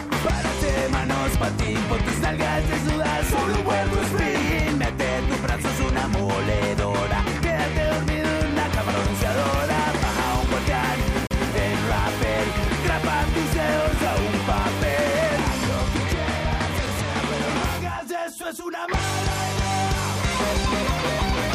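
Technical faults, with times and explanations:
11.27–11.31 s, CD skip: the audio mutes for a brief gap of about 40 ms and then resumes from a different point in the material, because the laser has jumped to another turn of the disc's spiral. That displacement of one or more disc revolutions is what sets it apart from an ordinary dropout: the sound after the gap does not continue where it left off, and the timeline shifts instead of simply pausing.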